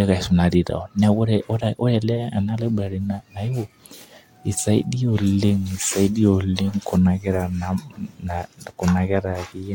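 No technical faults can be heard anywhere in this speech recording.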